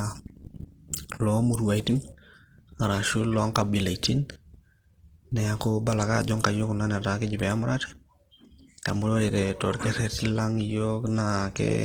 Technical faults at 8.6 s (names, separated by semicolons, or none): Opus compression